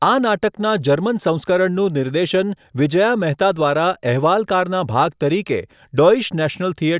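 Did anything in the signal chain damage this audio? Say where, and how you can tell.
No, nothing in the chain did.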